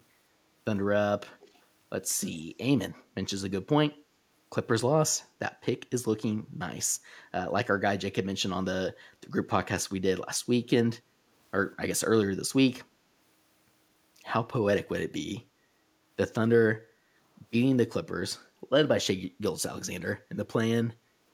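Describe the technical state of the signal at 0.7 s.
At 0.7 s the audio is intact, with no dropout, distortion, clipping or other fault present in the speech at that point.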